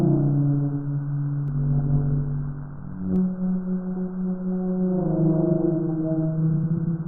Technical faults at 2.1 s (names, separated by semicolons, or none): overlap-add ripple